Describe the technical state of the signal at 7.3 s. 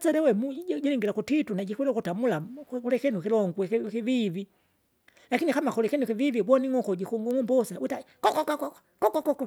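At 7.31 s a bit error spike flips one sample by a power of two, a sharp tick; the waveform shows a lone spike near -18 dBFS, the spectrogram a thin full-height line.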